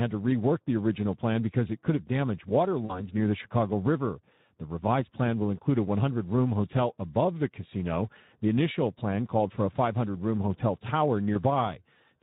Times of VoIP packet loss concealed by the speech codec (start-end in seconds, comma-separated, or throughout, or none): 2.85-3.03, 11.33-11.41